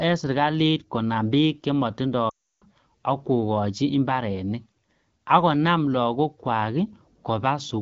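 From 2.29 to 2.64 s, lost AMR speech frames cut about 320 ms, fitting sixteen 20 ms frames. The wideband decoder repeats the last good pitch and vocal tract settings at falling gain, so the sound smears, fades quickly to silence, then returns weak or rough.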